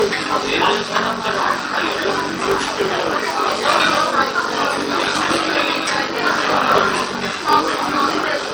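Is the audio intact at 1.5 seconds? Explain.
No. At 1.5 seconds the audio is affected by two faults, and both run through the whole clip.

The first is a block size mismatch (padded). One stage hands over shorter blocks than the next stage reads, so each block ends with a few milliseconds of zeros. These gaps repeat at 46.9 Hz, which fits a 1024-sample read, and give a steady buzz. The sound also runs slower, at about 0.86 times normal speed. Its pitch stays about where it should be, which separates this from a sample-rate error, where pitch and speed fall together.

The second is damage from likely MP3 compression at a low bitrate, around 40 kbps. Weak frequency components flicker in and out between frames, which gives a watery, swirling texture with metallic chirps on bright sounds and smeared attacks. That flicker is what separates it from a plain low-pass filter, which would only dull the treble.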